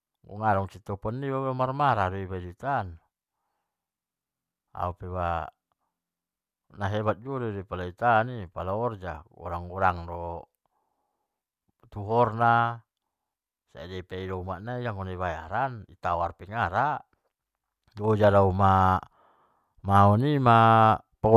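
No technical faults can be heard anywhere in the recording.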